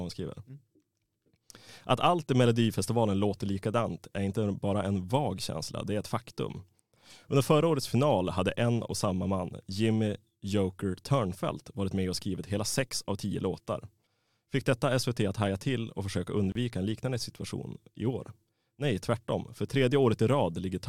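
A gap at a join of encoded pieces opens at 16.52 s: a gap of about 33 ms cuts into the speech, its edges smeared. Separately encoded segments were joined untrimmed, leaving encoder start delay and final-frame padding, before the speech resumes where it stopped.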